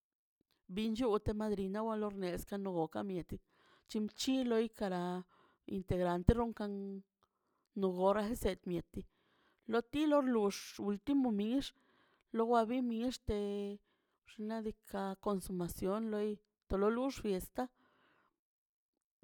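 No technical faults can be heard anywhere in this speech.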